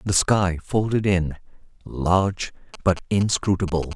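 Speech recording carrying GSM signalling bursts from 2.74 to 3.93 s: a galloping dit-dit-dit of short 217 Hz buzzes, roughly 15 dB below the voice, rectified from a nearby 2G phone. Unlike steady mains hum, it comes in gated clusters.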